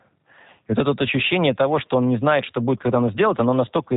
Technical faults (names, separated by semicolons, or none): G.729 codec